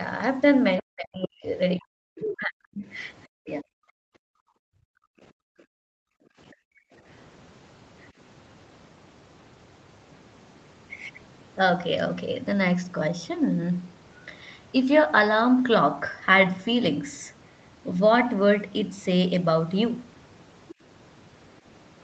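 Speech that repeatedly dips early on, at 0.8–1.47 s, 1.79–2.85 s, 3.36–3.66 s and 6.67–6.9 s, with the voice sinking by about 40 dB in places. This is speech suppressed in double talk: with both ends talking at once, the echo canceller likely could not tell the local voice from loudspeaker echo and attenuated everything. A second voice, the other side's voice leaking through, briefly surfaces at 2.27–2.37 s about 10 dB under the speech and again at 20.69–20.75 s, much fainter at about 25 dB down, likely as residual loudspeaker echo the canceller failed to remove. From 3.94 to 6.38 s the room ambience sinks by about 40 dB and then returns. That is background gated by the echo canceller, which clamped the microphone hard while the loudspeaker was active.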